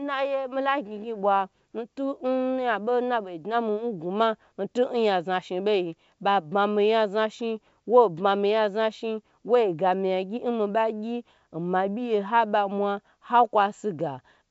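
Nothing here needs flagging, since the speech simply comes across as wideband telephone audio in G.722 at 64 kbit/s, with its top end stopping at about 7.7 kHz the way that coding path would leave it.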